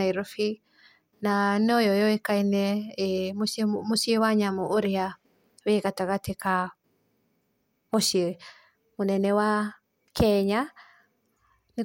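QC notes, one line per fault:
No faults heard in this speech recording. Nothing here needs a QC note.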